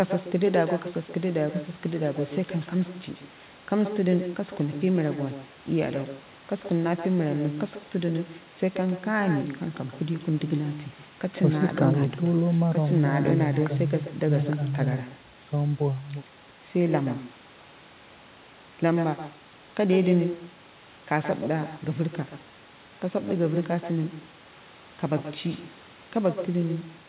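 Throughout the speech, an echo with no canceller returns each phrase roughly 150 ms later, about 9 dB quieter; the waveform shows trailing ghost copies, and the spectrogram is band-limited at 4 kHz.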